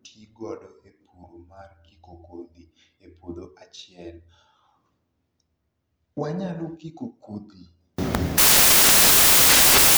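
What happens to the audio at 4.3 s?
Nothing goes wrong at 4.3 s; the speech runs through that moment intact, with no dropout, click or other fault.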